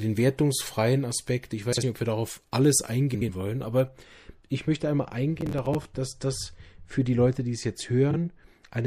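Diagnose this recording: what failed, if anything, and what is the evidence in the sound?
Throughout, the sound has a watery, swirling quality, with metallic chirping on bright sounds and softened attacks. The stage is the codec. This is likely MP3 compression at a low bitrate, around 64 kbps, where weak frequency lines flicker between frames and the treble is cut off.

Three brief garbled flutters occur at 1.72 to 1.83 s, 3.14 to 3.29 s, and 8.11 to 8.17 s. These are frames out of order, from network or storage delivery. Adjacent blocks of 48 ms, 72 ms and 24 ms were swapped and decoded that way, so nothing is lost but each stretch plays scrambled.

From 3.88 s to the end, the sound turns dull and muffled, sloping down about 13 dB at 10 kHz relative to 1 kHz. This is de-emphasis applied wrongly in the processing or playback stage: a treble cut meant to reverse pre-emphasis was applied where none existed, or applied twice.

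From 5.41 to 5.85 s, a burst of gritty crackle rides on the sound. This is processor overload crackle at the driver or buffer stage. Around ten successive deadlines were missed, which fits buffers of roughly 10 ms, and each miss replayed stale audio with hard edges.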